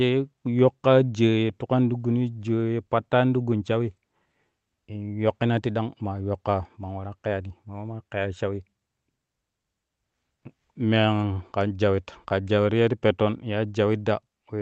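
Nothing stood out on listening to this speech recording, and no technical problem could be heard at any point.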